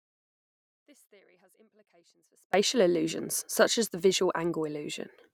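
From the very start to 2.54 s there's an audio dropout to a faint residue: only faint sound remains, roughly 35 dB down. That's likely a break in the signal path with the downstream side still live. It snaps back abruptly at "illusions such as the".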